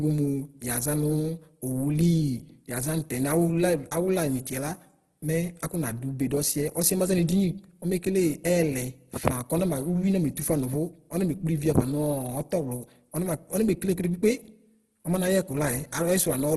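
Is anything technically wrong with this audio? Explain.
Yes. Throughout the speech the sound is rough and grainy, with a noisy, gritty texture on the voiced sounds. Nothing reaches above about 12.1 kHz, so the top end is dulled. This is most likely Opus compression at a very low bitrate, on the order of 12 kbps, running in its CELT music mode. When bits run short, the encoder keeps each band's energy but fills in the detail with folded or noise-like content, which produces this heavy grain instead of watery swirling.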